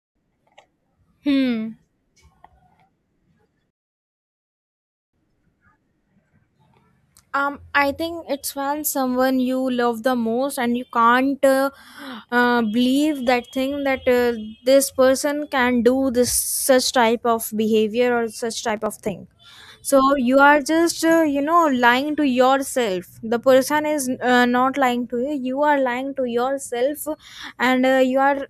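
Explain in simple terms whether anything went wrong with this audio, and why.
At 18.69 s the speech breaks into a short burst of processor overload crackle. It lasts until 18.86 s, right after "of behavior or such" and just before "of thing". The computer handling the audio fell behind. It works in tiny chunks, and these sound very short, under a millisecond each. A handful of chunks in a row were not ready in time, so they were simply skipped. Each skip leaves a hard little gap. Strung together, the gaps make a gritty tearing sound.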